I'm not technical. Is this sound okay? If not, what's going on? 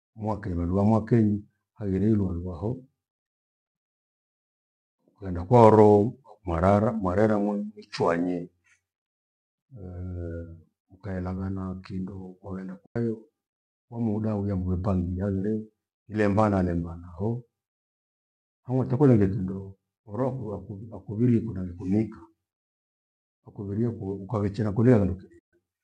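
No. The speech has two short gaps caused by AAC frame loss with muting. At 12.86 s, right after "mkaelangana kindo kwagenda", the sound drops out for about a tenth of a second, and at 25.39 s it vanishes again for about 0.14 s. Pieces of the compressed audio went missing, and the player filled them with silence. Unlike a hard cut, each gap fades out and back in smoothly. The light compression, likely the low-delay kind used in video calls, is a normal part of this audio.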